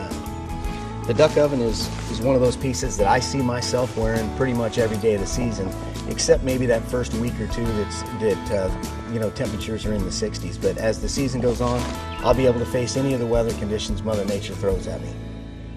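Throughout, the sound is dull and plainly gurgling, likely from MP2 compression at a rate that fits around 80 kbps. Upper sub-bands drop in and out as bits run short, so a spectrogram shows a ragged, flickering top edge with gaps.

DAB burbling appears from 5.41 to 6.34 s, 8.65 to 9.08 s and 11.40 to 11.50 s. Residual bit errors, at a rate of a fraction of a percent, corrupt samples in single sub-bands and, where they get through, scale factors, making sub-bands jump in level. The result is short noise blips and level jumps, visible as brief, isolated bright blocks.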